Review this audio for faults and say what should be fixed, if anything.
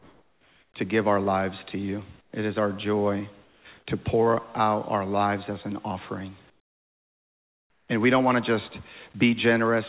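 Comfort noise in place of the background shows up at 0.00–0.74 s, 2.21–2.33 s and 6.50–7.88 s. The real background gives way to flat, featureless hiss, about 4, 18 and 14 dB quieter. That's likely discontinuous transmission, with the receiver synthesising noise during pauses. Turn off DTX, or have the sender update its noise description more often, so the pauses keep their real texture.

Sound dropped by the voice detector happens at 3.44–3.65 s. About 80 ms of actual sound is cut and replaced with steady noise. The detector probably mistook a quiet stretch for background and stopped sending. Loosen the detector's threshold or lengthen its hangover time so trailing sound isn't clipped.

The call path itself has nothing above 4 kHz, which fits a narrowband codec like G.711.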